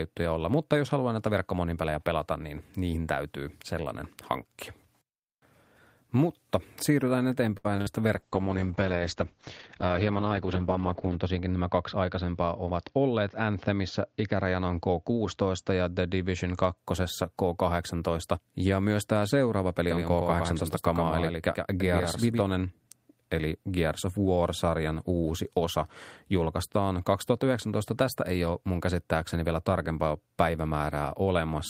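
At 7.57 s a syllable hangs on unnaturally, held for about 71 ms before the speech picks up exactly where it left off. This is a short stall from a late packet: the jitter buffer ran dry, so the receiver stretched the last sound until the delayed packet arrived. Nothing is lost, but the delay grows by 71 ms.

Around 7.76 to 7.80 s comes a brief smear, a small wobble in the sound. That is short concealed packet loss: about 20 ms never arrived in time, and the decoder papered over the hole by extending the preceding sound before blending back.

Right after, from 7.81 to 7.88 s, the sound turns into a held sound that fades, and then the speech jumps ahead. This burst of packet loss cost about 60 ms of audio. The receiver continued and faded the last sound across the gap, and whatever fell in between is simply gone.

From 8.17 s to 16.83 s the speech goes rough and muffled, with the crisp top end missing. 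It is a call bitrate drop: the encoder was pushed from 32 kbps down to 8 kbps, holding the lowest rate for nearly 3 s, and the bandwidth shrank from 20 kHz to 8 kHz before recovering.

Within that stretch, from 12.15 to 12.71 s, the speech briefly sounds rushed while keeping the same pitch, running at about 112% speed. That is a jitter buffer speed-up: the receiver had too much audio queued and trimmed around 70 ms, in many tiny pitch-period slices, to reduce the delay.

After "myös tämä seuraava peli", from 19.91 to 22.41 s, a dry second copy of the speech trails roughly a tenth of a second behind, about 5 dB quieter, and it starts and stops abruptly with no room tail. This doubled audio track likely comes from the same signal being captured twice through a slower path.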